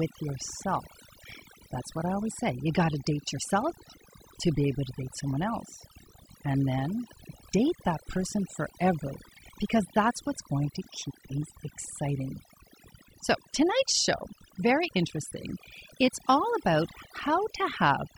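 Right from the start and all the way through, this speech has overdone noise removal. The denoiser was pushed too hard, so it shuts off bands it mistakes for noise, taking quieter parts of the voice too. Gaps go near-silent with little twinkling specks.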